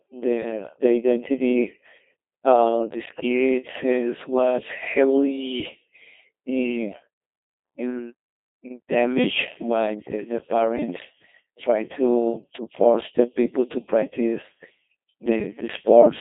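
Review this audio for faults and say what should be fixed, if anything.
Codec 2 vocoder damage runs through the whole clip. The speech sounds heavily robotic and buzzy because it has been rebuilt from sine waves that follow pitch and a coarse envelope, which fits a 2.4 kbit/s mode. A spectrogram shows rigid harmonic combs confined to 200 Hz to 3.6 kHz, and the waveform no longer follows the original shape. To prevent this, capture or transmit the speech with a wideband waveform codec instead of a low-rate vocoder.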